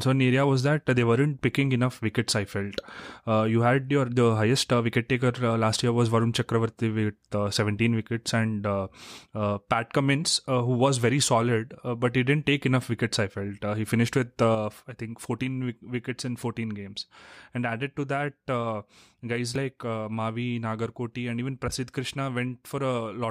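One channel drops out from 14.55 s onward: the speech abruptly drops about 6 dB, likely from losing one stereo side before the mono sum.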